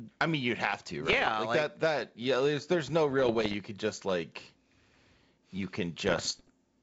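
Speech over a G.722 wideband link suffers bit errors on an ADPCM link, with bits flipped at under one percent, which upsets the decoder's step size and predictor. The result is pops and rough bursts with brief level changes at 1.05–1.37 s, 3.20–3.55 s and 6.07–6.50 s.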